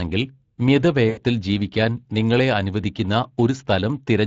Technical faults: Speex codec; VoIP packet loss concealed by the speech codec

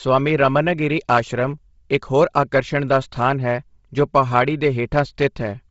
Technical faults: Bluetooth LC3 compression

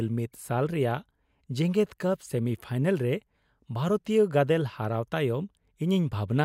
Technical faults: none

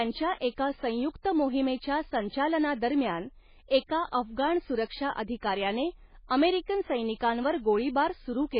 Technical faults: MP3 compression

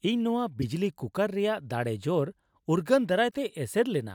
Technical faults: damaged data in a compressed stream

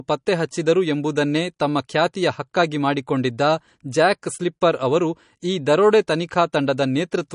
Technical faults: MP3 compression

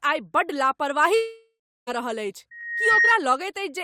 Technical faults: long network dropout; loudspeaker feedback squeal

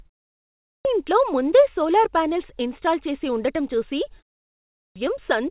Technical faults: clipped start after a pause

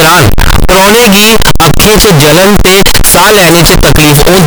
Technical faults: float read as integer

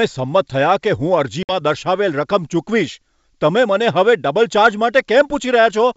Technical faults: packet loss on an ADPCM call

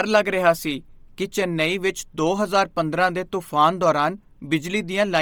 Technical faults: Bluetooth LC3 compression

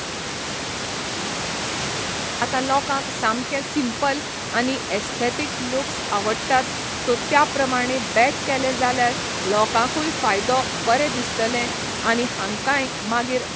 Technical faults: audio dropout to silence

